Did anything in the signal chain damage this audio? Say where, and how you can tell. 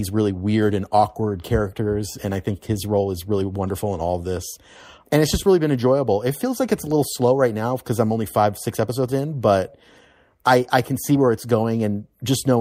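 Yes. The damage sits at the network receive stage, in the jitter buffer. There is clock drift between sender and receiver: the sender's clock runs fast, by about 4 percent, so packets arrive faster than the receiver plays them out and the buffer keeps overfilling. It differs from ordinary network jitter, which gives random gaps in both directions. Here the pressure is one-sided and never lets up across the clip.

The evidence is repeated timing corrections from 0.01 s to 12.56 s. The receiver keeps discarding short slices of speech to drain the surplus, in effect playing at 104 percent. The cuts are unevenly spaced but always remove material. They come across as small hiccups and a slightly rushed, unsteady tempo. They are not packet-loss dropouts, which leave silence or smeared concealment and occur at random.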